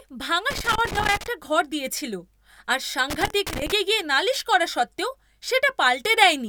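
An irregular burst of crackle and scratching cuts through the speech from 0.51 to 1.27 s, just before "ঘর দিয়েছিল আর", and again from 3.10 to 3.72 s, before "গিয়ে নালিশ করা সত্ত্বেও". This is loose connector crackle: a worn or dirty contact repeatedly makes and breaks, chopping the signal.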